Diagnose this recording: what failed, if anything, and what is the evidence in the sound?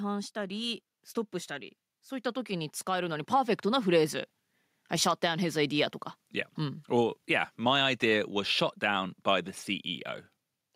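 The failure is in the call processing stage: automatic gain rising. From 2.46 s to 3.94 s the speech level climbs steadily by about 6 dB. The rise is smooth and takes about one and a half seconds, with no step or click. The gain control judged the input too quiet and raised its gain. It applies that gain to the whole signal, so the voice and the background noise floor swell together.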